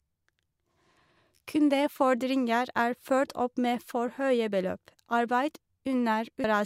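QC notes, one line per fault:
6.44 s compressed frames skipped: the audio jumps ahead roughly 300 ms, which fits three 85.3 ms frames.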